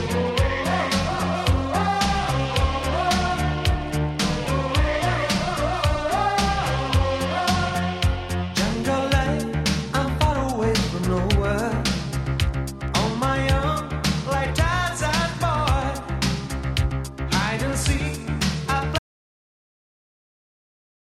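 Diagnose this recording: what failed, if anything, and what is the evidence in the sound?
An audio dropout to silence hits at 18.99 s and holds to the end, about 2.1 s of silence with no room tone or noise floor. The input stage likely lost its source, through a disconnected device or a failed link, while recording continued. The abrupt cut, rather than a fade or a gate's residual hiss, sets it apart.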